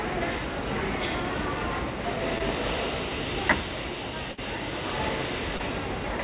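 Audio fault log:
2.38 to 2.42 s and 5.57 to 5.61 s, short concealed packet loss: About 20 ms of audio went missing each time. The receiver briefly continued the preceding sound, then blended back. Each gap is a tiny smear or wobble in sound already limited to below 4 kHz.
4.32 to 4.39 s, burst of packet loss: Several packets in a row were lost, about 60 ms in total. The receiver stretched the last sound across most of the gap and faded it as it went. You hear a held buzz or fading hiss, then the audio jumps ahead.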